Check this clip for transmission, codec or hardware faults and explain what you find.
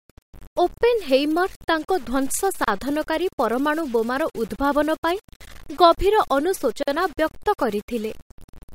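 One fault runs through the entire clip. The speech has a grainy, gritty distortion that moves with the voice, roughly 25 dB below it, and the quietest moments sputter or fall silent. The likely cause is low bit depth without dither: samples rounded to very few levels, which fits about 7 bits, so the rounding error tracks the signal instead of becoming steady hiss.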